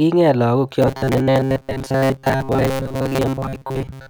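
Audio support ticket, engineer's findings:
Robotic sound from repeated short buffers, 0.82 s to end of clip. Speech becomes rigid metallic buzz at 134 Hz, fitting a repeated segment of about 7.5 ms. Roughly 70% of the audio in that span is repeats, not new signal. Likely cause: audio arriving too seldom, playback buffer looping its last block. Unlike dropouts or clicks, there are no gaps, and the buzz pitch stays fixed.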